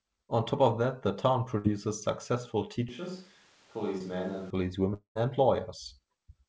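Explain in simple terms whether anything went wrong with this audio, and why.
Four separate problems can be heard in this speech recording.

At 1.58 to 1.66 s there is a burst of packet loss. Several pieces of the call in a row never arrived. The receiver tried to cover the hole by stretching the last bit of sound and letting it fade, and then the speech jumps ahead, skipping about 60 ms. It lasts long enough to sound like a brief held buzz or hiss with a skip, rather than just a tick.

From 2.89 to 4.50 s the sound suddenly turns hollow and roomy. It gets quieter and has more background noise, and then it snaps back just as suddenly. That points to a switch to a distant microphone, likely because the close microphone dropped out and a mic further away took over. Network faults only affect the sound for a moment, but this change in tone lasts about one and a half seconds and changes the character of the whole passage.

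At 3.98 to 4.02 s, inside that hollow stretch, there is a short concealed packet loss. A tiny piece of the call, about 20 ms, went missing, and the receiver smoothed over it by guessing what came next. All you hear is a quick smear or wobble. It is much shorter than the burst at 1.6 s and leaves no real gap.

At 4.94 to 5.17 s there is a long network dropout, likely caused by the connection briefly stalling. The last sound is drawn out into a fading buzz that dies away to near silence before the speech returns, and about 0.2 s of the speech is lost. Unlike the two smaller losses, it goes on long enough for the filler sound to fade out completely, so you hear a gap with speech missing.

The call codec also removes everything above 8 kHz, which gives the sound its dull top end. That is normal for this kind of call connection and is not a fault.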